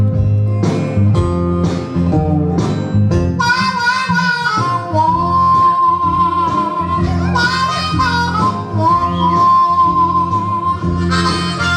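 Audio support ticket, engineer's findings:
Nothing stood out on listening; no symptom found to attribute to any component in this clip.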